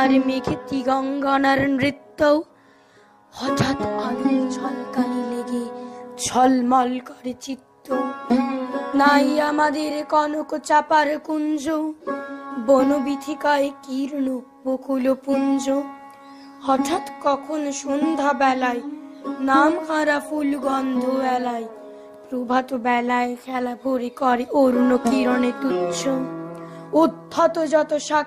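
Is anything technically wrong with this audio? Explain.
No, nothing technically wrong can be heard anywhere in this audio.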